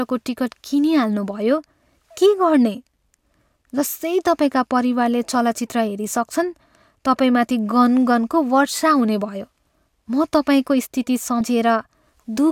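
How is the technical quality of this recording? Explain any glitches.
The recording has two short dropouts where compressed frames were skipped. The compressed frames skipped occur at 9.58 s and 11.40 s. Whole blocks of coded audio were never decoded, either missing or rejected as corrupt, so the speech leaps forward, by about a tenth of a second at 9.58 s and about 70 ms at 11.40 s. Each jump matches a few frames of roughly 24 ms.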